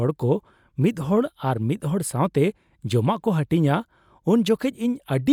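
Nothing here to flag: the speech comes through without any technical faults worth pointing out.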